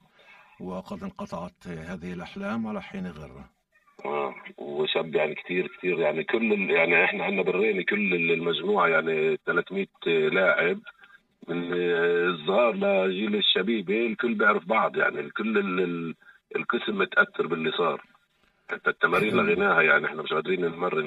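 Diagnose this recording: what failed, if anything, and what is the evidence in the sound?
Channel delay (comb filtering) at the buffer stage: one channel lags about 5 ms, so the mono sum notches evenly from around 100 Hz, sounding hollow throughout.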